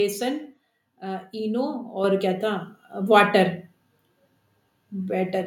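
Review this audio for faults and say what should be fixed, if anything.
At 2.04 s, just before "क्या था", the microphone volume is stepped up by about 7 dB as automatic gain raises the input. The waveform envelope jumps abruptly, and the spectrogram brightens evenly across all bands. Prevention: disable automatic microphone gain in the call software and set a fixed input level.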